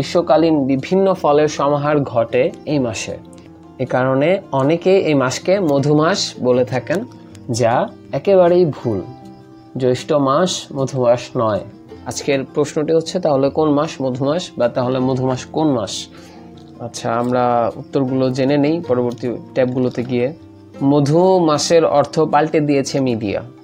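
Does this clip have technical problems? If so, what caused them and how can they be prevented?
No, this clip has no technical problems, so there is nothing to prevent.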